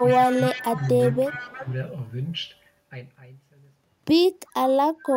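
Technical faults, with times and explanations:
0.00–1.69 s and 4.46–4.52 s, echo leak: the far end's echo canceller likely failed to remove loudspeaker sound picked up by its microphone and sent it back. A copy of the speech trails by 0.36 s, about 15 dB down at first, then a brief, very faint scrap about 40 dB down near the end.
0.02–0.08 s, 0.51–0.59 s and 1.27–1.67 s, speech suppressed in double talk: with both sides talking, the canceller likely mistook the talker for echo and turned everything down. The speech dips briefly by about 5 dB in the first two spots and by about 10 dB over the longest stretch.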